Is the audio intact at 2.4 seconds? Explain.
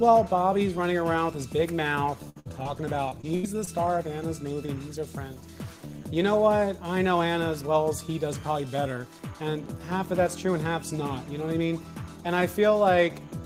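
No: a burst of packet loss runs from 2.29 to 2.38 s and again from 2.40 to 2.47 s. Each time about 60 ms of audio is lost, the receiver stretches the preceding sound and fades it out, and the sound then picks up further on.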